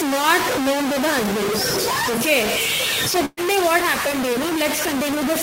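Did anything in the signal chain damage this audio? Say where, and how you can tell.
Yes. Throughout the clip the speech is coated in a harsh, grainy distortion that follows every syllable and is roughly as loud as the speech itself. Quieter stretches break up into a sputtering buzz instead of fading smoothly. This is low bit depth without dither, likely from a careless sample-format conversion that truncated the samples to something like three bits. With so few levels, the rounding error tracks the waveform and becomes distortion.

Between 3.25 and 3.40 s the speech stops moving forward. The last sound is held and faded out for about 117 ms, followed by roughly 20 ms of silence. It then resumes further along, with about 120 ms of speech simply gone. That is a burst of packet loss on the network. Several consecutive packets never arrived in time, so the receiver concealed the gap by repeating and fading the last audio, then skipped ahead.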